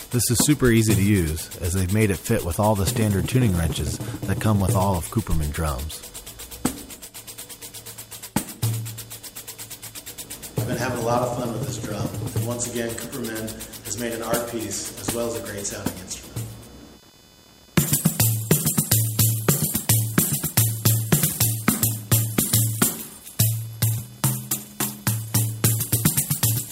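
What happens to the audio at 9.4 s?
At 9.4 s the computer's changing processor, graphics or mouse load is disturbing the audio circuit's shared ground, as it does for the whole clip. This computer activity noise shows up as a buzzy chirping pulsing around 500 Hz, roughly 30 dB below the sound.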